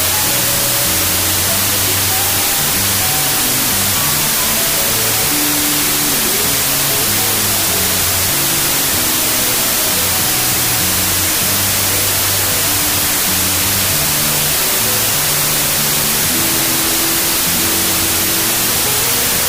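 Throughout, a wrong sample width fault: the sound fits packed 24-bit samples read as 32-bit, so most values mix bytes from neighbouring samples. Loud noise buries the original, which plays 1.33 times fast and high-pitched. A byte-order swap would keep normal speed.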